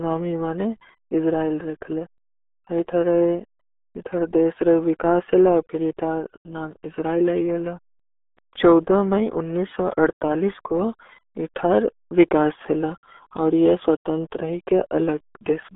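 From start to finish the speech carries RealAudio 14.4 codec damage, and it is heavy. The sound sits in a narrow band of roughly 300 Hz to 3.5 kHz, with nothing at all above 3.7 kHz, so consonants lose their edge and the voice turns muffled. The coding also leaves a gargling texture on the voice, which fits the RealAudio 1 coder running at about 8 kbit/s.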